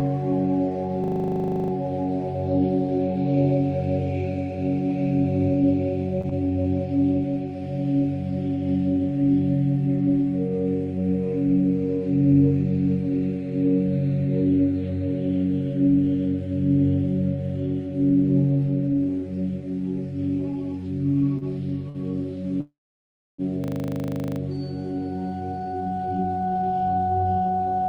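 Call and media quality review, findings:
System hang loop, 1.04 to 1.72 s. A 40 ms piece of audio repeats exactly, 17 times, as a 25 Hz machine-gun stutter. Probable component: host or audio driver froze while the output hardware kept replaying the same ring buffer. That fits a 40 ms buffer. Same fault again at 23.64 to 24.4 s, 19 repeats at 25 Hz. Nothing skipped either time. Time simply stalls on a looping fragment.

Repeated stalls (stutter), 6.21 to 6.67 s. Three brief holds, longest 22 ms, 57 ms filled in total. That is about 12% of the span stretched. Probable component: jitter buffer running dry as packets arrived late. The receiver extended the last sound each time, then resumed. Nothing missing. The passage drags and judders.

Short stall from a late packet, 21.38 s and 21.89 s. The first holds about 30 ms, the second 55 ms. Each time a sound is sustained too long. Probable component: jitter buffer underrun on a single late packet. 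The receiver stretched the last audio until the packet landed, then continued from the same point. Nothing lost, delay grew each time.

Call audio freeze, 22.61 to 23.41 s. A 779 ms gap is inserted. A brief fading continuation leads into about 660 ms of silence, then the audio resumes exactly where it stopped. Nothing missing. Likely cause: packets held in transit, emptying the jitter buffer, with concealment fading out over the long wait. Overall delay rises by 779 ms.

Jitter buffer speed-up, 25.41 s to end. Audio runs at about 118% of normal speed, pitch unchanged, and sounds hurried. Probable component: jitter buffer draining surplus audio held above its target. Many short pitch-period pieces are cut in a row to pull latency back down. Contrast with Opus call path audible as codec coloration and a top end ending near 12 kHz, consistent with about 32 kbps.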